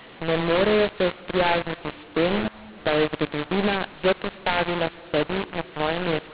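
Speech over a G.711 telephone path, band-limited to 4 kHz as the 8 kHz rate demands, and the whole thing suffers from mu-law and A-law mixed up. It was encoded A-law but decoded as mu-law, so levels get scrambled, the speech sounds harsh and gritty, and the quiet gaps fill with noise.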